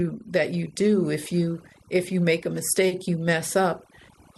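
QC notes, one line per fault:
Throughout: overdone noise removal. Lowered background with twinkling specks, because an over-aggressive denoiser cuts frequency bands near its noise estimate.
2.87–2.93 s: short concealed packet loss. A brief smear or wobble in the voice, where about 40 ms of missing audio was filled by extending the preceding sound before blending back.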